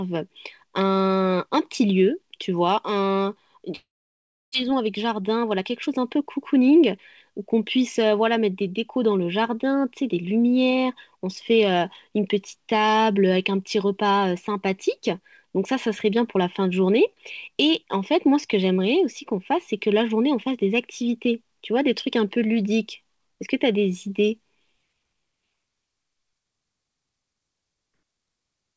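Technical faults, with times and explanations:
3.76–4.56 s, long network dropout: the sound breaks off, the last fragment is stretched into a fading buzz, and about 0.67 s of near silence follows. This is likely a burst of lost packets, so about 0.6 s of audio never returns.
4.63–6.99 s, jitter buffer speed-up: after the gap the buffer held surplus delayed audio, so the receiver repeatedly cut out pieces of one or a few pitch periods, roughly 150 ms in all. The sound runs about 7% fast at unchanged pitch and feels slightly hurried.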